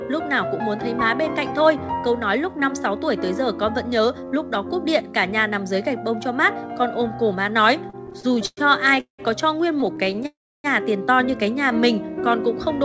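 Repeated stalls (stutter) run from 7.90 to 8.59 s. Packets arrived late, so the jitter buffer emptied nine times and the last sound was stretched over each gap, the longest 110 ms. The audio drags and hiccups.

A call audio freeze follows at 9.00 to 9.21 s. The sound hangs briefly, falls silent for 120 ms, then resumes where it stopped, likely because packets were held up in transit.

Stutter returns from 9.81 to 10.26 s as eight tiny stalls of 15 ms or less. A longer freeze runs straight on from 10.26 to 10.66 s and includes 300 ms of silence.

A jitter buffer slow-down from 11.69 to 12.20 s repeats single pitch periods to rebuild the buffer's reserve. The audio plays at 91% speed, drawn out at unchanged pitch, within the G.722 call path's band, which holds nothing above 8 kHz.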